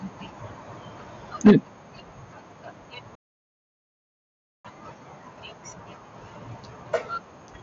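At 1.46 s the speech hits a microphone overload that lasts until 1.52 s. The peaks run about 5 dB past the converter's ceiling, and roughly a third of the samples in that stretch get their tops sheared flat. You hear it as a short, harsh crackle riding on the loudest part of the syllable. The likely cause is the mic's input volume being set too hot, so the peaks have nowhere left to go.

Right in the middle of that, at 1.47 s, there's a microphone volume step-down. The level drops by about 3 dB in one go, and everything after it sits quieter, both the speech and the room behind it. It lands just after the distorted peak, which fits the call software likely noticing the clipping and pulling the device's input gain down a notch to stop it.

Then at 3.15 s the sound just stops dead. It's a playback stall of about 1.49 s, and the audio doesn't pick up again until 4.65 s. It's a hard cut into silence mid-flow rather than a fade. 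The likely cause is the player running dry on data or its thread getting blocked, leaving the output with nothing to play until it recovered.

All of this comes through the Bluetooth mSBC headset path, so nothing reaches above about 8 kHz and there's a faint grain on the louder moments.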